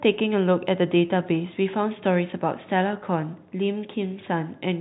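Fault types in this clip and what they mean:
No fault types turn up in this clip.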